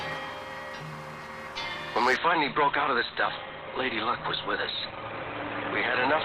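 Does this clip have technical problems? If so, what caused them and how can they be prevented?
Yes. From 2.16 s to the end there's an adaptive stream at a lower bitrate: everything above 4.3 kHz is gone and artefacts jump in suddenly. The connection slowed and the player dropped to a leaner version, which fits a switch from roughly 64 to 12 kbit/s Opus. To prevent it, give the stream a bigger buffer or a steadier connection.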